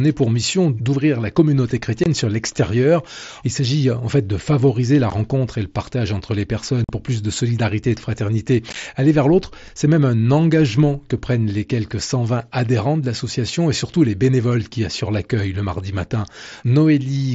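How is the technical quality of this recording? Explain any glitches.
The recording has four brief dropouts, carried over a wideband mSBC Bluetooth headset link whose own coding adds only light graininess.

Unconcealed Bluetooth headset packet loss: the sound cuts to abrupt holes at 2.04–2.06 s (after "mission d'ouvrir la communauté", before "sur l'extérieur"), at 5.10 s, at 6.84–6.89 s (after "le partage entre les", before "pour plus de solidarité"), and at 8.70–8.76 s just after "solidarité et de fraternité". The last one breaks into several short holes over 60 ms. Headset packets went missing and nothing filled the gaps. The gaps run 15 to 45 ms, which fits losing whole 7.5 ms codec frames.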